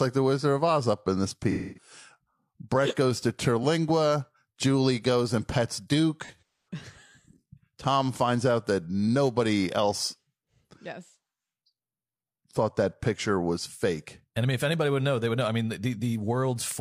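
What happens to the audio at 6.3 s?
Right after "goes and pets", from 6.24 to 6.68 s, the speech turns smeared, noisy and phasey in patches. This is AAC frame loss with concealment: about 256 ms of audio went missing, scattered in bursts with the longest run roughly 150 ms, and the decoder filled the gaps by recycling the last good spectrum.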